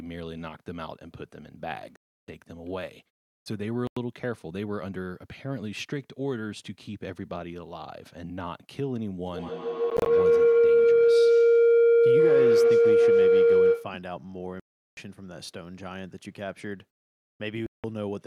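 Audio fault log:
1.96–2.28 s, 3.87–3.97 s, 9.90–10.06 s, 14.60–14.97 s, 17.66–17.84 s: Bluetooth dropout. Packets likely arrived too late and were discarded, so the speech falls silent for 67 to 370 ms and resumes as if it had played on. At 9.90 s the gaps are short and scattered.
9.25–14.04 s: feedback howl. Two devices share the call and the loop gains level on each pass, repeating roughly every 150 ms and building to a tone near 500 Hz that peaks about 12 dB above the speech.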